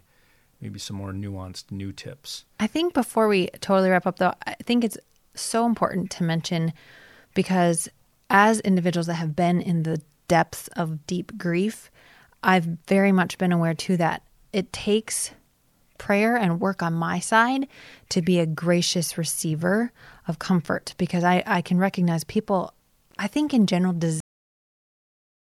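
At 24.20 s, just after "I think in general", the speech stops abruptly with a cut-off end. The final stretch of audio was never written out or played, so the signal ends partway through a sound rather than trailing off. There is no natural decay and no fade. The level falls straight to digital silence, which holds for the remaining 1.4 s to the end of the clip.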